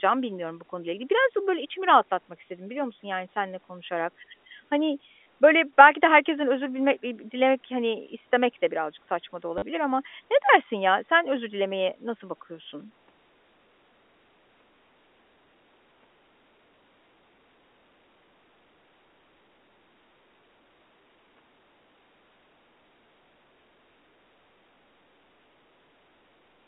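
At 5.23 to 5.26 s, just before "böyle belki de herkesten", there is packet loss with the last packet repeated. About 30 ms went missing. At 9.58 to 9.62 s, between "de birazcık saçma da" and "ama ne dersin ya", about 40 ms went missing. Each gap was filled by replaying one short slice, which fits 10 ms packets. The repeats buzz at about 100 Hz, a brief robotic stutter over the narrow telephone band.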